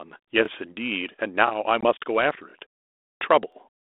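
Speech passes through a 32 kbit/s G.726 ADPCM telephone path, band-limited to roughly 250 Hz to 3.6 kHz. Overlapping chunks cause brief stutters at 0.45–0.48 s, 1.48–1.50 s and 3.52–3.55 s, where about 23 ms of audio plays twice at joins spaced around a second apart. Unlike a dropout, nothing is missing there; a sliver simply repeats. Packet loss on an ADPCM call opens a hard-edged 20 ms hole at 1.81 s, likely a couple of lost packets. The sound then returns slightly distorted as the decoder's predictor resynchronises, settling by 1.90 s.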